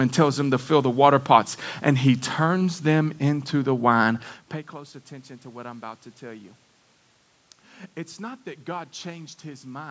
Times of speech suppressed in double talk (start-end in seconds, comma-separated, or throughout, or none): none